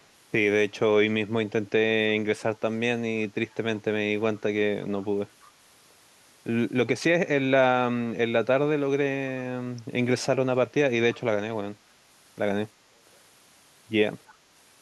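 Short echo leak scraps occur at 3.51–3.55, 4.35–4.40, 5.02–5.06, 5.41–5.48 and 14.27–14.35 s. Each is a very faint copy of the speech, trailing it by 331 ms. A loudspeaker echo canceller likely let residual echo through.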